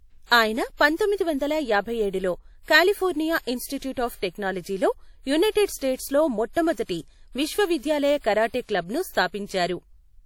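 A ringing, washy hiss that swells and fades with the speech runs throughout, with nothing above 19.8 kHz, likely WMA compression at a low bitrate near 48 kbps. Pre-echo appears from 0.77 to 0.81 s and from 5.51 to 5.55 s, just before "స్టేట్స్లో మొట్టమొదటి విశ్వవిద్యాలయ కరాటే": a brief hiss of 37 ms and 47 ms softens each attack, because coding noise spreads back across the transform block.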